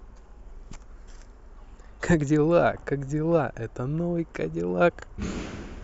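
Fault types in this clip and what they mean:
No faults detected in this speech recording; nothing to report.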